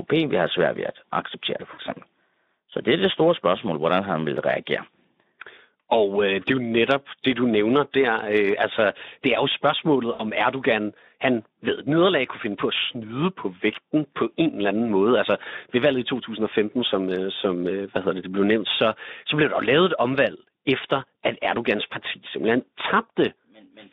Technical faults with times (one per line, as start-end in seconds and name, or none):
1.73-1.80 VoIP packet loss concealed by the speech codec
10.13-10.25 VoIP packet loss concealed by the speech codec